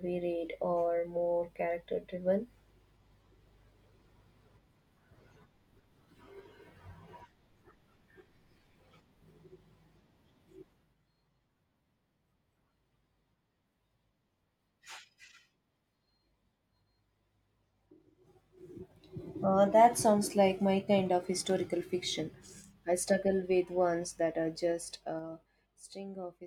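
A speech clip with zipper noise from 24.6 to 25.68 s. The level drops by about 15 dB in 3 dB steps, roughly four per second, with no smoothing. Each step clicks, so a zipping tick rides on the fade.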